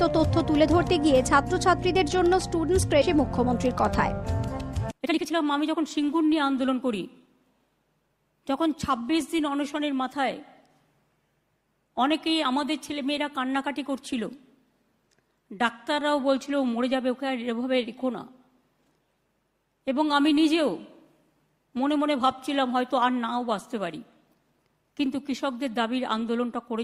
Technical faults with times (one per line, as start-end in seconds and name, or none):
3.01-3.03 skip ahead
4.80-7.27 jitter buffer speed-up